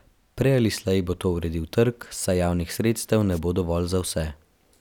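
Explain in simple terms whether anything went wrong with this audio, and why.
At about 3.32 to 3.39 s there's a quick burst of static: a wireless microphone noise hit. The radio link from the mic faded for a moment, probably from reflections cancelling the signal, so receiver hiss surged up briefly.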